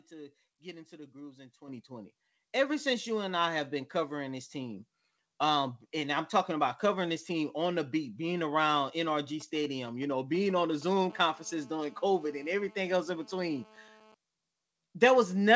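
At 1.68 s, right after "into the grooves in", the microphone volume is stepped up by about 9 dB in a single jump, and at 2.7 s, just before "since you and I", it rises again by about 3 dB. Both times the speech and the room background lift together and abruptly. This is the call software's gain control deciding the input was too quiet and raising the device level in one step rather than ramping it.

From 9.08 s to 11.07 s, beginning just after "the beat being around", GSM signalling bursts break through as a galloping dit-dit-dit of short buzzes at a 217 Hz repetition rate, sitting around 20 dB below the speech. A nearby 2G handset sending brief groups of radio bursts while signalling to the network causes this. The audio circuitry rectifies the RF and turns the burst envelope into audible clicks.

From 11.10 s to 14.15 s, GSM phone buzz takes over as a continuous, hard, raspy tone at 217 Hz, rich in harmonics and about 29 dB below the speech. 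Here the handset is in a call and transmitting steadily, so the rectified pulses form an unbroken buzz that bears no relation to the speech. The buzz is band-limited along with everything else, since nothing in the audio extends above 8 kHz, which fits a 64 kbps G.722 wideband call path.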